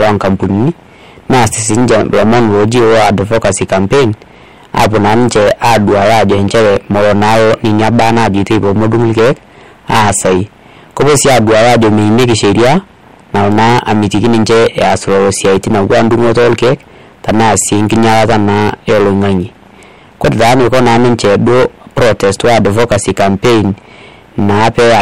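From start to finish the speech is hit by hard clipping: it's driven roughly 24 dB past what the stage can pass, so around a third of the waveform gets sliced flat. Those squared-off peaks throw harmonics way up top, giving a harsh fuzz on every loud sound.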